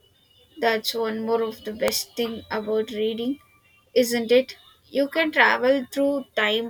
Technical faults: electrical switching spike

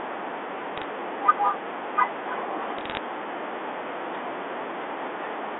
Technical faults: bit errors on a digital phone line

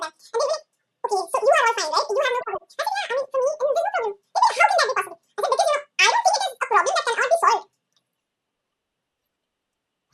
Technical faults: audio read two samples at a time (double speed)

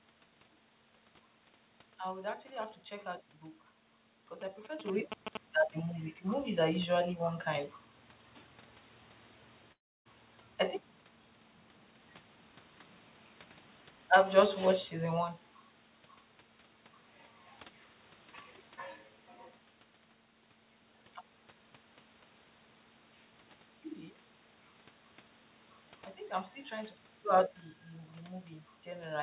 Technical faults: GSM signalling bursts; long network dropout; automatic gain falling; automatic gain rising

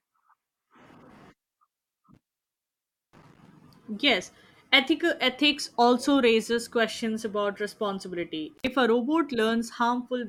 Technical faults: intermittent contact

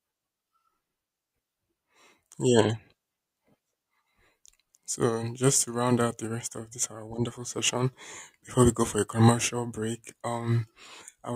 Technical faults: none

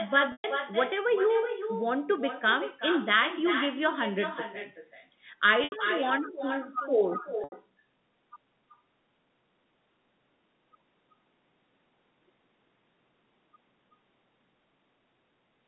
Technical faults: echo with no canceller; packet loss with pitch repetition

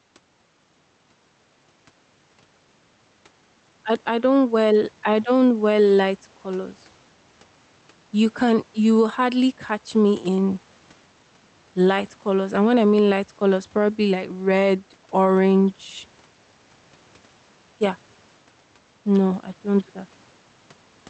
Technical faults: gain pumping

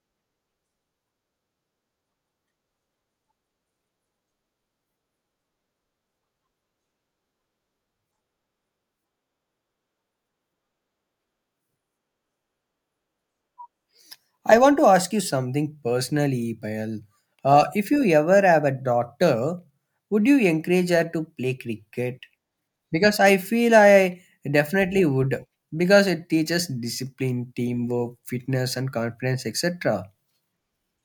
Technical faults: none

